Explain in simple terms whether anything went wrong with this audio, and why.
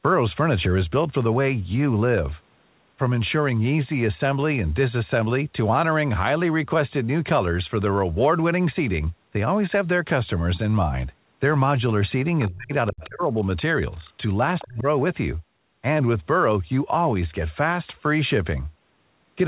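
A couple of things slip between about 12.5 and 14.9 seconds. First, speech suppressed in double talk: the voice dips hard or nearly vanishes from 12.47 to 12.72, 12.91 to 13.39, and 14.64 to 14.86 seconds. Most likely the echo canceller heard both ends talking at once and turned everything down.

Second, the other side's voice leaking through: faint scraps of another voice come through at 12.99 to 13.09, 14.05 to 14.11, and 14.59 to 14.66 seconds. That's likely loudspeaker sound the echo canceller didn't fully scrub out of the microphone.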